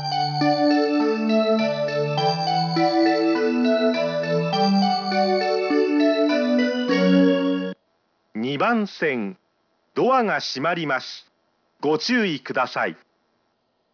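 From start to finish the audio carries aliasing. The band stops dead at 5.5 kHz, which points to a drop from a 48 kHz rate to 11 kHz with no low-pass filter first. Everything that lay above 5.5 kHz has folded back below it as unrelated tones, roughly 20 dB under the main signal, so bright detail sounds gritty and metallic. A spectrogram shows energy pressed hard against the 5.5 kHz edge, with mirrored traces descending as the real content rises.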